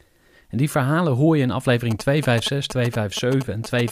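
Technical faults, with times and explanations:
1.91 to 3.90 s, GSM signalling bursts: after "verhalen hoor je in", a nearby 2G phone's radio bursts are rectified into a galloping dit-dit-dit of short buzzes at 217 Hz, roughly 10 dB under the speech. The grouped bursts distinguish it from steady mains hum or a continuous in-call buzz.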